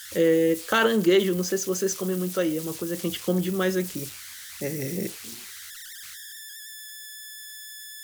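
Converter idle tones run throughout: an undithered delta-sigma converter whistles near 1.5 kHz, about 16 dB below the speech, pitched and unrelated to mains frequencies.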